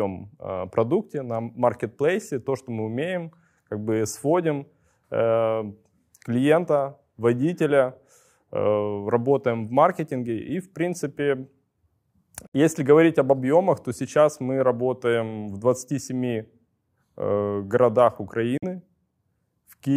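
Speech with two Bluetooth dropouts. The sound cuts to silence from 12.47 to 12.55 s and from 18.57 to 18.64 s, with abrupt or briefly faded edges. It resumes further along, as if it had kept playing. Late packets to the headphones were likely dropped.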